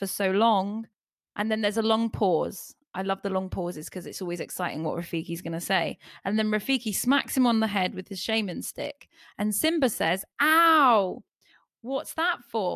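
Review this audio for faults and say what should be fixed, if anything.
Nothing here needs fixing; I listened through the whole recording and didn't hear any technical fault.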